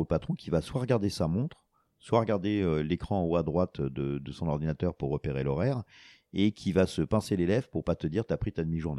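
No technical faults can be heard anywhere in this speech recording. There is nothing in it to mark with a time.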